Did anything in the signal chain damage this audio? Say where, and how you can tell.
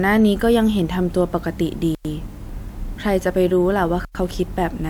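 Yes, there is a gap between chunks at the storage or playback stage. The speech stops dead from 1.95 to 2.05 s and again from 4.05 to 4.15 s. Each hole is 100 ms long and they repeat every 2.1 s, which points to audio handled in 2-second chunks with silence inserted at each join. On a waveform these look like flat silent stretches with abrupt edges, and on a spectrogram like empty vertical bands across all frequencies.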